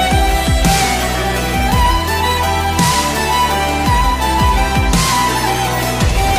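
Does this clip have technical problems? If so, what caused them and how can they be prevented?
No, no technical faults are audible in this recording, so nothing needs preventing.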